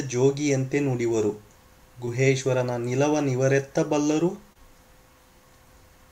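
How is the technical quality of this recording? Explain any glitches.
Two brief glitches are audible, both short concealed packet loss. At 2.05–2.09 s and 4.53–4.57 s, about 20 ms of audio arrived too late, and the receiver extrapolated the preceding sound to fill the gap, leaving a short smear or wobble.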